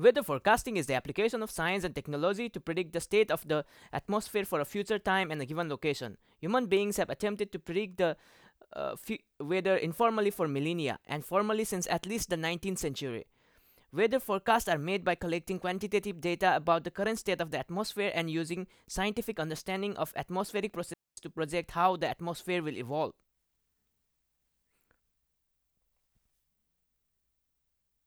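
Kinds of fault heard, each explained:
Digital wireless dropout: The radio link carrying the speech lost too much data for the receiver to rebuild it, so the receiver muted its output. At about 20.94 s the sound stops cleanly and stays near silent for roughly 0.24 s, returning at about 21.17 s. The mute fades in and out very quickly. No burst of hiss, crackle or static comes before or after the gap. It is a clean hole in the audio.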